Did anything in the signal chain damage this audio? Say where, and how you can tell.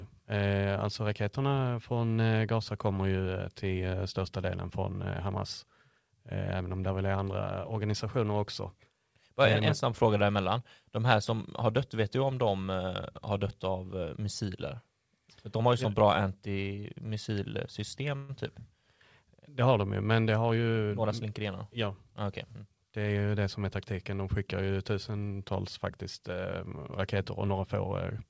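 Yes. At 18.16 to 18.31 s the speech stops moving forward and the last sound stretches into a short buzzy or hissy tail that fades out. Then the speech picks up exactly where it left off, with nothing skipped. That's a call audio freeze at the buffer/network stage, likely packets arriving late so the jitter buffer ran dry. The receiver padded about 130 ms with concealment, and that adds the same amount of delay to everything after it.

Right after that, from 20.21 to 21.41 s, the talker sounds rushed. It's running at about 111% speed, but the pitch doesn't rise. That's a jitter buffer speed-up in the same buffer stage. Too much audio was queued, so the receiver trimmed it back by cutting out short pitch-period-sized chunks over and over. That adds up to roughly 150 ms removed. The G.722 call path stays band-limited to 8 kHz throughout.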